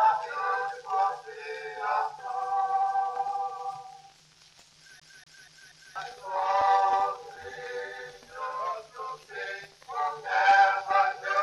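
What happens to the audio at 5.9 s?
CD stuck on one turn, running from 5.00 to 5.96 s and ending just after the moment asked about. A scratch knocks the laser back one track at the same point on every rotation, so a 240 ms slice of audio repeats four times, each pass cut by a brief mute, giving a fast, even skipping stutter.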